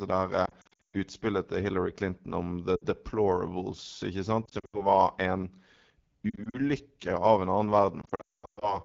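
Speech sounds rough and raspy throughout. This is AMR wideband (HD Voice) codec damage, and its harshness points to a low mode around 8.85 kbit/s. The speech also warbles, smears and briefly fades out at 0.45–0.96 s (just before "utspillet til"), 2.75–2.84 s, 4.45–4.86 s, 6.29–6.58 s and 8.02–8.79 s. These are lost AMR speech frames: the decoder stretches the last good sound with falling gain, and the longest gap, about 220 ms near the end, drops to near silence.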